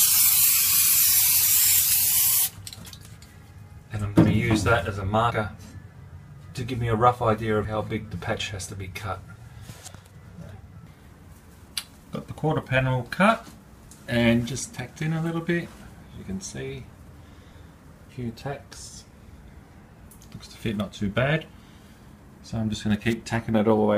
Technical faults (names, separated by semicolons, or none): compressed frames skipped; audio missing between chunks